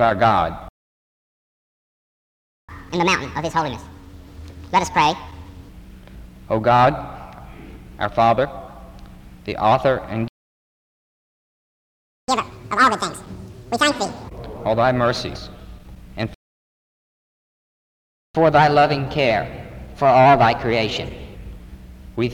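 The player likely ran out of data, so a playback stall cuts the sound to silence for 2 s at 0.68, 10.28 and 16.34 s. After each stall, catch-up at higher speed resamples the backlog, which raises both speed and pitch. From 2.69 to 5.69 s it plays at 1.5x, about seven semitones sharp. From 12.28 to 14.28 s it plays at 2x, about ten semitones up. From 18.35 to 21.35 s it plays at 1.1x and sounds only slightly sharp.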